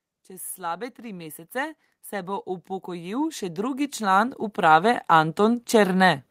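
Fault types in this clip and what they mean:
Automatic gain rising: the automatic gain control judged the incoming speech too quiet and kept turning its gain up, so from about 0.56 s to 5.7 s the voice and the background noise swell together by about 19 dB rather than jumping at once. On the waveform the envelope widens steadily across that span, noise floor included, and on a spectrogram every band, the gaps between phrases too, brightens gradually from left to right.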